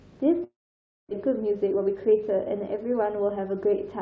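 At 0.44 s the sound breaks off, and for about 0.69 s what you hear isn't real signal: the last bit gets stretched into a fading buzz, then it drops to near-silence before the audio picks back up at 1.13 s with roughly 0.4 s just gone. That's likely a long network dropout, where the receiver fills the gap with concealment and then mutes once it has nothing left to extend.

From 1.27 s to 3.73 s everything runs about 10% fast while the pitch stays put, so it comes across a bit rushed. That's a jitter buffer speed-up. After the gap, the buffer was holding around a third of a second more than it wanted, so the receiver snipped out short pitch-period-sized chunks over and over to drain it. It's coming through the G.722 call codec at 64 kbps, which explains why there's nothing above 8 kHz.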